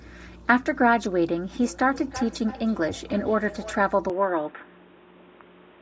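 From 1.63 to 3.98 s there's feedback echo between two devices: the speech loops back roughly every 300 ms, up to about 16 dB below the direct sound, thinner with each pass. At 4.10 s, with no gap, the sound turns duller as the band narrows, the level shifts by a few dB, and faint new background noise appears, most likely because the input switched to a poorer device.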